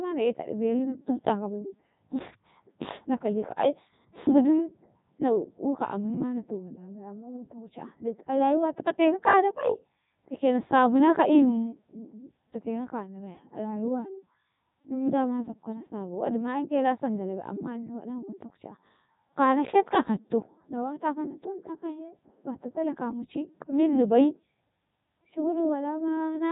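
A speech clip carried through the Codec 2 vocoder for its full length, with heavy damage. The decoder rebuilds the voice from sine waves at the transmitted pitch rather than keeping the waveform, so it sounds robotic and buzzy. Nothing survives above 3.8 kHz, which fits the 3.2 kbit/s mode.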